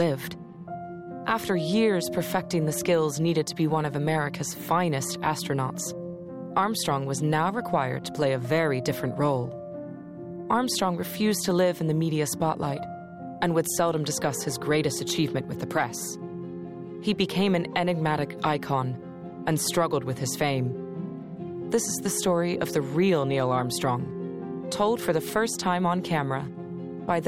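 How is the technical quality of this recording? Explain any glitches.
The recording has one persistent glitch. A resampler restarted on every block throughout: each block was converted separately, leaving edge errors that produce a 50 Hz buzz, which fits 20 ms blocks.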